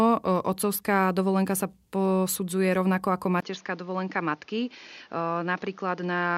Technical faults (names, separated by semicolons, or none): input switched to a poorer device